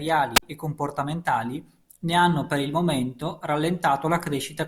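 The analogue FM radio link from the wireless microphone fades too weak, so the receiver's squelch mutes the output: a wireless microphone squelch dropout from 0.35 to 0.43 s. Hiss rises briefly, a roughly 50 ms hole of near silence follows, and the speech resumes at "e comportamentali ne hanno".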